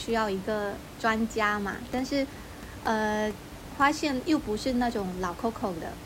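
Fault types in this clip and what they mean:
No system faults found; the room's ambient noise sits about 14 dB below the speech and belongs to the recording itself.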